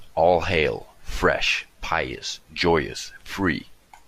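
Nothing faulty to report on this speech recording.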